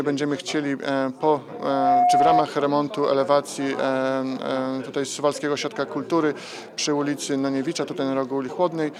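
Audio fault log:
1.54–2.52 s, loudspeaker feedback squeal: a single tone near 716 Hz swells over roughly 0.4 s and holds at about 5 dB above the rest of the sound, because the microphone re-captures its own loudspeaker and the loop gain at that frequency exceeds one.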